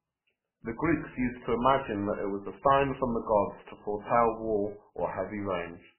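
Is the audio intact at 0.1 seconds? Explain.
No. At 0.1 s the speech is already affected by two faults that run through the whole clip.

The first is a filter restarted on every block. The filter discards its memory at each block boundary and starts again from silence, so every block opens with a small transient. Those transients repeat every 5 ms, producing a 200 Hz buzz that sits under the speech and rises and falls with its level. At 0.1 s the buzz is present and tracks the signal.

The second is heavy damage that is likely MP3 compression at a very low bitrate. Nothing above 3 kHz survives, so the speech sounds dull and band-limited. Weaker spectral components are dropped and restored from frame to frame, which gives a watery, swirling texture, and consonant onsets are smeared rather than crisp. This coarse, muffled quality is already audible at 0.1 s, layered with the buzz.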